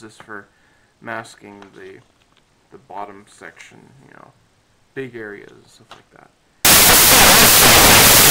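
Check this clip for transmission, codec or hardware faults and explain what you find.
One fault is present. From 6.65 s to the end at 8.30 s, the audio turns into samples built from the wrong bytes. Each sample's bytes are assembled incorrectly, through a one-byte offset, swapped byte order or a wrong alignment, so the fast-changing low bits dominate. The result is loud, harsh broadband noise.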